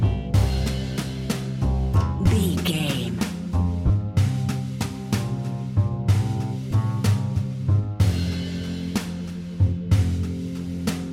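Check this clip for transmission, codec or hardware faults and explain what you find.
There are brief lost LE Audio frames at 2.26 s, 3.87 to 3.90 s and 6.71 s. These are gaps of about 10 ms, 30 ms and 10 ms, which fits one, three and one lost 10 ms LC3 frames. The decoder refills each gap by repeating the last spectrum with randomised signs, so the sound smears into brief noise instead of dropping to silent holes or clicking.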